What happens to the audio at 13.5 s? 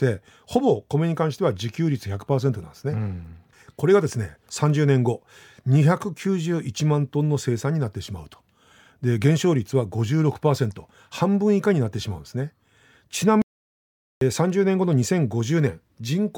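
The speech cuts out abruptly at 13.42 s and the output stays completely silent until 14.21 s, a gap of about 0.8 s, before the sound resumes. This is a playback stall. The likely cause is that the player's buffer ran dry or its playback thread was held up, so no samples reached the output until it caught up again. Nothing is garbled or distorted; the audio simply stops mid-flow and then carries on.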